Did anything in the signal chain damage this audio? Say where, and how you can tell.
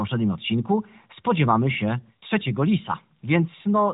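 No, nothing in the chain damaged this audio. It has passed through an AMR narrowband mobile codec working as designed: nothing above about 3.8 kHz survives, and the light coding texture fits the codec's 12.2 kbps mode.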